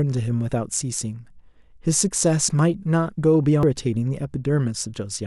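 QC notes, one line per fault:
3.63–3.66 s, damaged data in a compressed stream: corrupted bytes make the decoder lose sync, producing a brief disruption while it searches for the next frame header.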